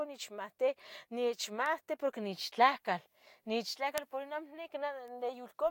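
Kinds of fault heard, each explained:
Bit error spike: a single flipped bit in memory or on a digital link throws one to three samples off by a power of two before they snap back, so the speech carries three isolated sharp, broadband ticks, at 1.66 s, 3.98 s and 5.08 s, unrelated to the sound around them.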